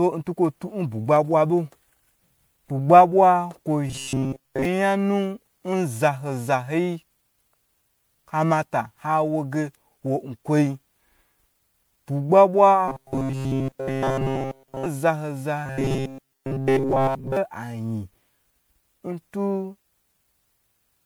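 Throughout the speech there is generation loss: a swirly, hollow, smeared quality with blurred consonant onsets, beyond what a single encode would produce. It fits audio likely passed through MP3 several times, around 128 kbit/s, with quantisation noise and spectral holes accumulating on each pass.

Robotic sound from repeated short buffers appears at 3.87–4.65 s, 12.88–14.86 s and 15.66–17.37 s as a rigid metallic buzz at 134 Hz that loosely tracks the speech. This likely comes from a roughly 7.5 ms buffer being replayed while new audio arrives late. In the first and third spans most of the audio is replaced; in the middle span, all of it.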